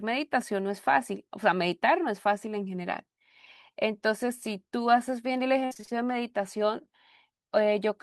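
Repeated packet loss (robotic sound) runs from 5.65 to 5.93 s in this speech clip. Over that quarter-second the stream keeps losing audio in short bursts, roughly half a dozen of them, the longest about 56 ms. Each hole is bridged by stretching out the sound just before it, and more than half the span ends up synthesised this way, so the speech turns choppy, with small pieces audibly missing.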